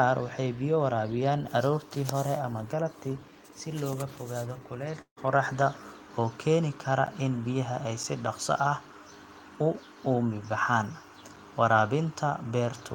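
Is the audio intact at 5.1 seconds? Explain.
No. From 5.01 to 5.19 s there is a long network dropout. The sound just before the gap is stretched into a fading buzz or hiss for roughly 150 ms, about 100 ms of which is silence, and the audio resumes with about 160 ms of the speech gone. This likely comes from packets failing to arrive, with the receiver's concealment running out. A brief packet loss would be patched almost unnoticed. Here the concealment decays into silence, and material is skipped rather than delayed.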